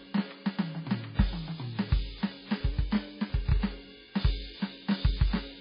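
From the first second to the end, the music carries a doubled audio track: a second, full-band copy runs roughly 0.7 s behind the first at about the same loudness, so every attack lands twice with no decay or room colour on the echo. The likely cause is the same signal reaching the mix twice, once through a slower path. On a waveform, each transient has a twin of similar height about 0.7 s later; a spectrogram shows every onset pattern repeated at that fixed offset.

Running alongside it for the whole clip is heavy MP3 compression. Nothing is present above 5 kHz, so the top end sounds dull and boxy, and the remaining content has a watery, swirling quality with metallic chirps on bright sounds and smeared attacks. This level of damage points to a very low bitrate, where the encoder has to discard treble and weak detail. A spectrogram shows a hard ceiling at 5 kHz and blotchy, flickering patches below it where quiet components switch on and off.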